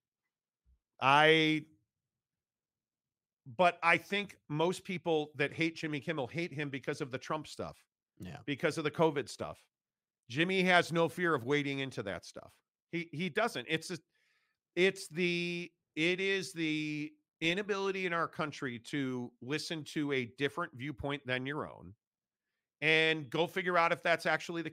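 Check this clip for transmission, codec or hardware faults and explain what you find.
No transmission, codec or hardware faults can be heard anywhere in this speech recording.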